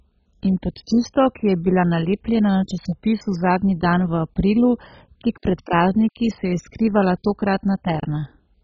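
Speech throughout, likely squeezed through MP2 compression at a very low rate, near 16 kbps, starves the sub-bands, leaving nothing above 7.4 kHz and a dull, gurgling, granular sound.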